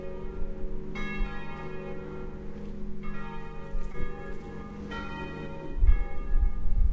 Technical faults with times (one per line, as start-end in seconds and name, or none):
3.92-3.96 short concealed packet loss